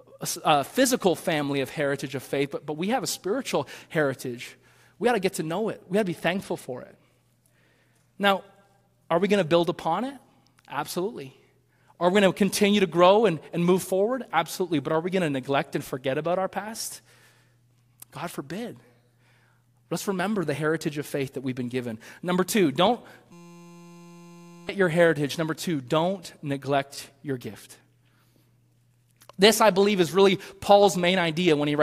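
From 23.32 to 24.69 s the speech turns into a steady buzz. This is a system hang loop. The system froze while the hardware replayed one 5.8 ms slice, which fits a 256-sample buffer. It repeats at 172 Hz. Roughly one and a half seconds are lost.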